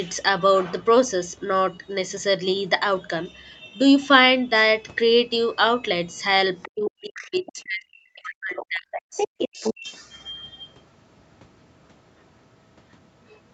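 A speech recording over a call path, band-limited to nothing above 8 kHz by the microphone processing and Opus coding, in which the echo canceller on the talker's device most likely failed to fully cancel the loudspeaker playback, so the other side's voice leaking through reaches the microphone signal. Brief scraps surface at 6.62–6.69 s, 7.46–7.52 s and 8.56–8.66 s, roughly 15 to 25 dB below the talker, then a longer stretch from 8.91 to 9.74 s sits nearly as loud as the talker. With both sides talking at once, the canceller likely could not separate its own talker from that echo and attenuated everything, giving speech suppressed in double talk. From 6.67 to 9.18 s the talker's voice dips, by as much as about 40 dB and for around two seconds in total, and again from 9.46 to 9.86 s by up to about 35 dB.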